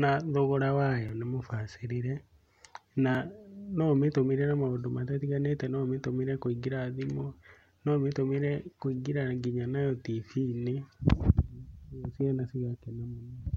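Speech where the output buffer likely went unfilled twice, leaving blocks of digital silence: 5.8 ms at 1.09 s, between "thogora wayo" and "nĩ mũbacĩrĩre" (which fits a 256-sample block), and 1.7 ms at 3.15 s. Each one cuts abruptly and is heard as a tick or dip.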